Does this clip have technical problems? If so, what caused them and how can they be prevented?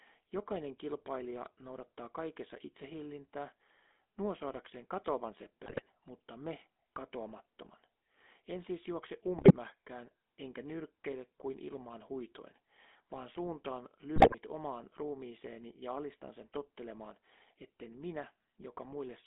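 Yes. The whole clip has gone through the GSM full-rate codec: the speech is held to roughly 250 Hz to 3.5 kHz and carries a plainly audible buzzy, gravelly roughness. That comes from how the codec works, modelling the vocal tract and feeding it a regular pulse excitation that keeps only every third sample, which fits the 13 kbps full-rate mode. To avoid it, record or route the call over a wideband or modern codec path rather than old GSM.

On top of that there are three bursts of GSM bit errors, at 5.66 to 5.82 s, 9.36 to 9.53 s and 14.16 to 14.35 s, each under a fifth of a second. The speech breaks up into squawks, pops and gargling there, which points to a few percent of bits getting flipped across a short run of frames. When corrupted filter, pitch or gain values reach the decoder, the spectrum bends or the level jumps for as long as the bad patch lasts. A stronger radio link, or a capture that doesn't depend on a marginal cell connection, would prevent it.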